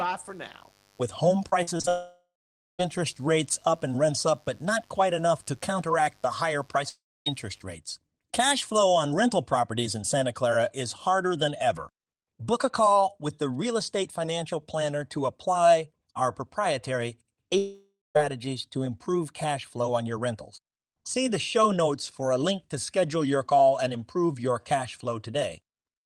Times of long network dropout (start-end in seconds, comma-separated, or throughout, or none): 1.89-2.81, 6.89-7.28, 17.58-18.19